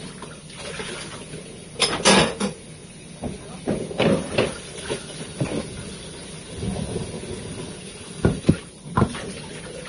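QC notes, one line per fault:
Throughout: Vorbis compression, likely, heavy. Nothing reaches above 10.6 kHz, so the top end is cut off and the remaining treble is coarsely quantised into hiss and grain, with roughened tones and smeared attacks. The damage points to a low bitrate of around 30 kbps. On a spectrogram there is a flat ceiling at 10.6 kHz and a speckled, noisy upper band where fine detail should be. On the waveform, transients look softened.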